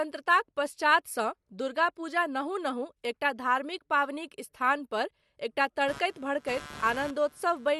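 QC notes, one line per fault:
5.88–7.80 s: computer activity noise, a buzzing chirp pulsing at roughly 150 per second, about 20 dB below the speech, from computer load changes shifting the shared audio ground.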